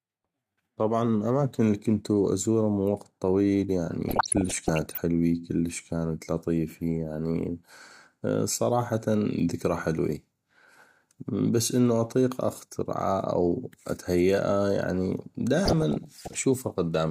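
Right after "ازوره من وقت طويل", from 4.09 to 4.98 s, the speech picks up DAB burbling: short blips of noise in single sub-bands, clearing before "كلش كانت لطيفي يعني". It comes back after "اتهيئه يعني", from 15.63 to 16.40 s. Weak reception is letting bit errors slip past error correction into the MP2 data, so corrupted scale factors, where they get through, make individual sub-bands jump in level for up to a frame. The density suggests an error rate of roughly half a percent.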